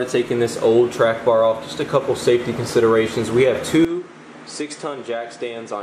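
An input switched to a poorer device at 3.85 s and stays that way to the end of the clip. With no gap at the changeover, the sound abruptly drops about 10 dB in level, loses everything above 9.8 kHz and turns duller, and a new, faint background noise appears well beneath the signal. That combination of narrower bandwidth, different tone and fresh noise floor likely comes from the recording system swapping to another microphone or a headset mid-take.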